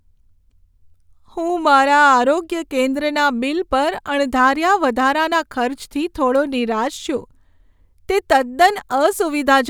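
Speech recording with no technical faults detected anywhere in the signal.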